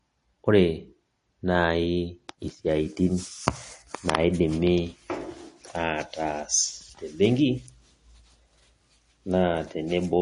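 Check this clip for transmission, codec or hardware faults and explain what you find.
The speech carries MP3 compression damage from start to finish. It is plainly audible, which fits a low bitrate of around 40 kbps. The likely cause is an MP3 encoder that was starved of bits. It dropped quieter frequency lines, which flicker in and out between frames. That leaves the speech with a watery, swirling texture.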